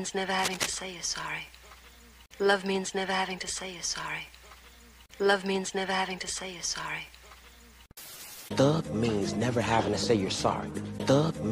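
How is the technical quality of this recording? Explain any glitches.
There is one clear glitch near the start. From 0.39 to 0.75 s, cable scratch noise sits over the sound, a dense, uneven rustling burst almost as loud as the audio itself. It is likely caused by a worn cable or connector shifting, its contact resistance fluctuating rapidly. Unlike isolated clicks or digital dropouts, the noise is continuous and ragged rather than sharp or silent.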